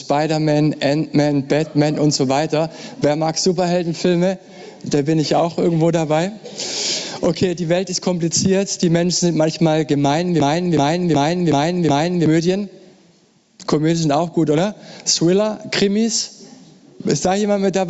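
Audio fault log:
Throughout: gain pumping. The level swings by roughly 15 dB. Loud and soft passages sit closer together than they should, so the whole clip sounds squashed and breathing. The likely cause is input gain set far too high for the microphone, with a fast limiter or compressor clamping down on each peak and then releasing.
10.40 to 12.26 s: system hang loop. One short slice of audio repeats exactly, five times in a row. Each pass lasts about 372 ms, so it stutters at 2.69 Hz like a machine gun. That length fits a 16384-sample buffer. The computer or driver stalled while the sound hardware kept replaying the same ring buffer. Around two seconds of real audio never arrives and is replaced by the repeats.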